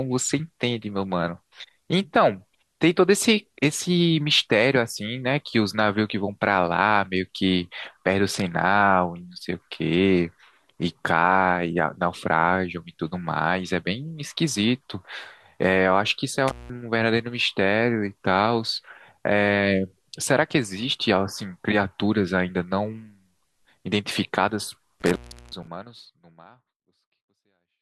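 Speech with two intermittent contact dropouts, at 16.48 to 16.70 s (open about 181 ms) and 25.00 to 25.67 s (open about 365 ms), where a loose plug or cable briefly breaks the signal path. The waveform collapses to a near-flat line, with crackle spikes at each edge showing as vertical streaks on a spectrogram. The second dropout falls within the smooth fade-out that runs from around 25 s to 27.8 s.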